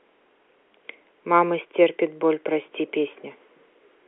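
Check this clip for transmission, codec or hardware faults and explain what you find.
Nothing wrong can be heard anywhere in this clip.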